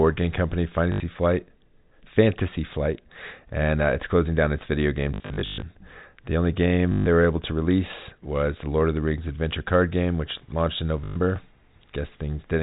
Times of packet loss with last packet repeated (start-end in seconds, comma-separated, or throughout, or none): 0.92-1.00, 5.14-5.62, 6.92-7.06, 11.04-11.16